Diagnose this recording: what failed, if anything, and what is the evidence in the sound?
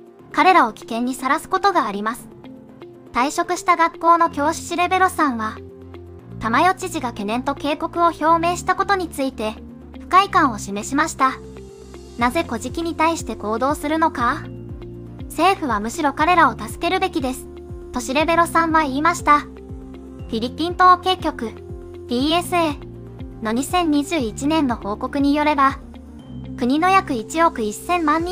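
Nothing stood out on listening that would point to a failure at any stage of the chain.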